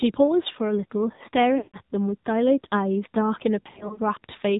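Throughout, the AMR narrowband mobile codec at 7.4 kbps removes everything above 4 kHz and adds a buzzy, synthetic edge that a plain low-pass filter would not.

From 1.58 to 1.77 s, lost AMR speech frames leave about 160 ms missing, which fits a run of eight 20 ms frames. The decoder stretches the last sound and fades it rather than cutting abruptly to silence.

From 3.62 to 4.00 s, about 120 ms of lost frames are scattered across 280 ms, with runs of 60 ms at most. The result is brief warbles and dips instead of one fade.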